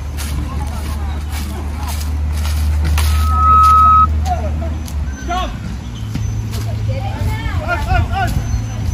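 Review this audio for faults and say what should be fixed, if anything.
A loudspeaker feedback squeal runs from 3.05 to 4.07 s. A single tone near 1.3 kHz swells over roughly half a second. It ends up well above the rest of the sound, around 10 dB louder. It happens because the microphone hears the loudspeaker it drives. At that frequency the loop gain passes one, so the tone feeds itself and keeps rising until it stops. To prevent it, move or aim the microphone away from the loudspeaker, lower the gain, or notch out 1.3 kHz.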